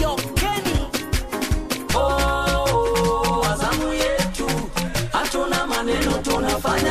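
No technical faults can be heard anywhere in the audio; the signal holds steady and intact throughout.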